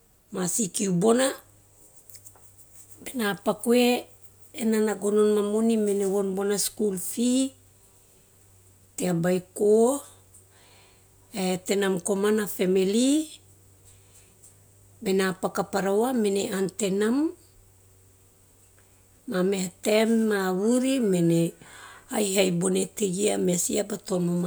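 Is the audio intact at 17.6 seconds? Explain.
Yes, at 17.6 seconds the audio is intact, with no dropout, click, distortion or other fault at that moment.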